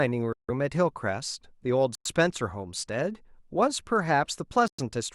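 At 0.33 to 0.50 s, 1.95 to 2.07 s and 4.68 to 4.80 s the speech drops to silence for 160, 104 and 108 ms, then resumes. Each is likely a Bluetooth stall, where delayed packets emptied the headphone buffer until retransmissions arrived.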